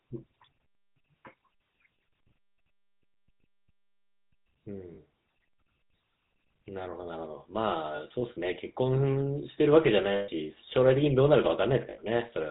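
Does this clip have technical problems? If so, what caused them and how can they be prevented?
Yes. Throughout the speech there is a buzzy, gravelly roughness, and nothing above 4 kHz comes through, so the voice sounds narrow and harsh. That is the GSM full-rate codec, which fits its 13 kbps rate. It rebuilds speech from a vocal-tract model driven by a sparse, regularly spaced pulse excitation, which discards much of the fine detail. Using a wideband or modern codec such as AMR-WB or Opus, instead of legacy GSM, would prevent it.

Short metallic ringing holds appear at 3.12–3.18 s, 4.94–4.99 s, 7.96–8.02 s, 10.12–10.30 s and 11.90–11.99 s. At those points the sound freezes into a rough buzz, the longest being the 160 ms gap near 10.1 s. These are lost GSM frames. The decoder stands in for each missing frame by replaying the last good frame's parameters, with the level usually falling from the second lost frame on. 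Stronger channel error protection and better radio or network conditions would prevent these losses.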